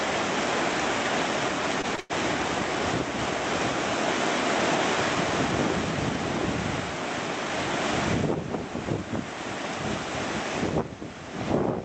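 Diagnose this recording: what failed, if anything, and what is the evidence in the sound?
Sound briefly holds at 1.81, 1.95 and 2.00 s, stretched about 21, 22 and 99 ms: short stalls from late packets, where the network jitter buffer emptied and concealment filled the gaps.

From 3.19 to 6.81 s a dry, full-band copy trails roughly 0.7 s behind at about 5 dB lower, starting and stopping abruptly: a doubled audio track, likely from a second, slower capture path.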